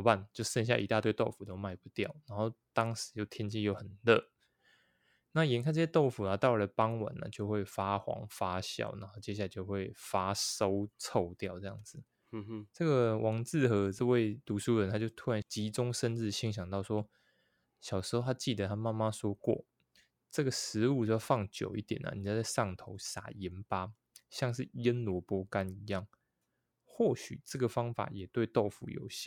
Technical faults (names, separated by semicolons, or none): none